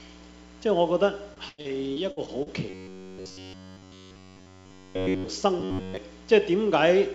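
From 1.34 to 2.49 s the audio breaks up with repeated packet loss. Data keeps arriving late or not at all, and each hole is bridged by stretching the last sound forward, so about a quarter of this span is filler rather than real signal. The longest hole is around 91 ms. Because some material is plainly missing, the result is choppy.

From 2.70 to 5.28 s, and again from 5.60 to 5.97 s, the sound turns into a robotic buzz from repeated short buffers. The software keeps looping a tiny slice while fresh audio is skipped, which stamps a fixed 93.8 Hz drone onto everything. That rate likely points to a buffer of roughly 10.7 ms. The first stretch is looped throughout, and most of the second is. Unlike the choppy loss earlier, this is a steady, rigid buzz that still loosely tracks the original contour. Across the clip, nothing is heard above 8 kHz, consistent with the call codec's band limit.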